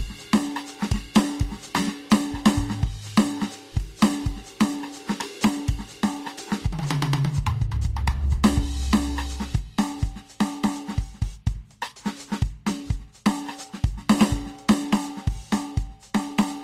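Transcoding between lossy codecs runs throughout the music. Its mixed smearing and the absence of anything above 15.9 kHz likely come from two low-bitrate passes, consistent with Vorbis followed by Opus.

Clock slip clicks occur from 0.99 s to 16.15 s: about fifteen faint ticks, roughly one per second. Each is a single dropped or repeated sample, likely from unsynchronised clocks differing by around 20 ppm.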